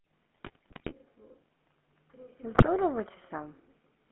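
Throughout, the speech has the buzzy, gravelly roughness of the GSM full-rate codec, consistent with 13 kbps coding. The band runs only from 200 Hz to 3.4 kHz.

From 0.35 to 0.93 s, and again from 2.54 to 2.69 s, GSM bit errors corrupt the decoder's parameters. The voice breaks into squawks, pops and gargling.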